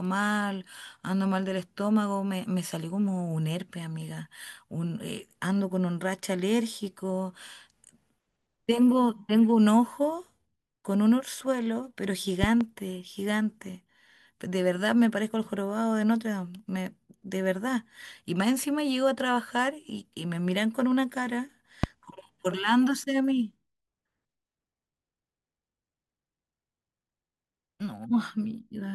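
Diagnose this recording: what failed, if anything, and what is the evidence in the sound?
Three loud pops sit on top of the speech: a double pop from 12.44 to 12.63 s and a single one from 21.84 to 21.86 s, each about 15 dB above the signal. They show as tall waveform spikes and thin full-band spectrogram lines. The likely cause is a voltage transient in the analogue wiring.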